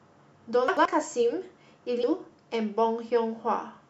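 A short speech clip with two glitches. From 0.68 to 0.85 s there are chunks out of order: one 85 ms block lands one slot late and swaps with its neighbour, so you hear a brief jumbled stutter. Then at 2.03 s there's damaged data in a compressed stream. The decoder hits corrupted frames, loses sync and skips ahead to the next header, which comes out as a tiny blip.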